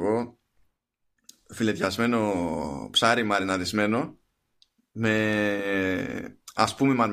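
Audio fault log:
No faults heard anywhere in this speech recording.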